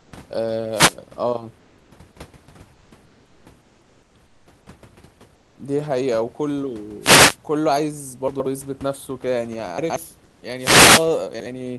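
Speech recording with a fairly quiet room noise sitting about 36 dB under the voice, and two faults on top of it. First, comfort noise in place of the background during the pauses at 0.0–0.12, 1.58–1.91, 2.73–2.91, 3.05–3.45, 3.61–4.14, 4.26–4.46, 5.35–5.57 and 10.24–10.42 s. The natural room sound gets swapped for a smooth, featureless hiss, sometimes up to about 5 dB quieter. That's most likely Opus DTX muting the sender between phrases and the receiver synthesising filler noise. Second, chunks out of order at 8.28–8.46, 9.78–9.96 and 11.34–11.46 s. Each is a short jumbled stutter where a 60 ms slice of audio turns up after its neighbours, two slices late in the first two spots and one late in the last. Nothing goes missing, but the sequence is scrambled with hard joins.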